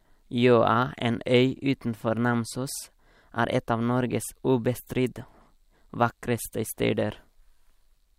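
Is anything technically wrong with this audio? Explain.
No, the signal shows no technical faults anywhere in the recording.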